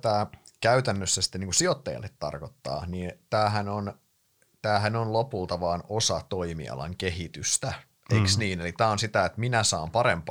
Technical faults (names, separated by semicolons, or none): none